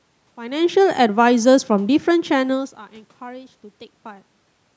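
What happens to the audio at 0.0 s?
Nothing goes wrong at 0.0 s; the speech starts intact, with only the ordinary room background and the normal low-cut of call microphone processing.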